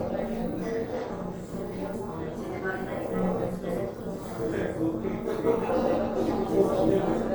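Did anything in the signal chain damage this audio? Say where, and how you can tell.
Yes: a metallic buzz runs throughout at around 200 Hz, about 11 dB deep. This is overlap-add ripple: frame-based processing rebuilt the audio with overlapping windows that don't sum evenly.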